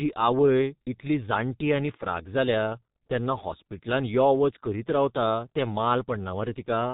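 G.723.1 codec damage runs throughout the speech: everything above 4 kHz is gone, and the coarse 30 ms frames with a slowly updated voice model leave the speech muffled and hoarse, consonants smeared, consistent with the codec's bitrate of about 6.3 kbit/s.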